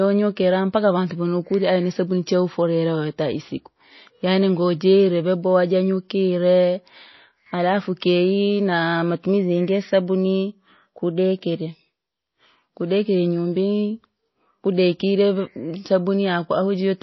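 From start to finish, the speech carries plainly audible MP3 compression damage, likely from encoding at a very low bitrate. Nothing is heard above 5.8 kHz, so the treble is cut off flat. The encoder ran short of bits and dropped weak frequency lines, which flicker in and out between frames. The result sounds watery and swirly, with metallic chirps on s sounds and smeared attacks. The damage level fits roughly 24 kbps.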